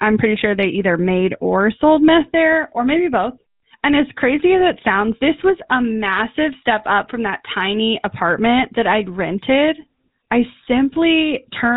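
From start to finish, the speech carries GSM full-rate codec damage, which fits a 13 kbps stream: a buzzy, gravelly roughness from sparse pulse excitation, plus nothing above 4 kHz, unlike plain band-limiting's clean muffling.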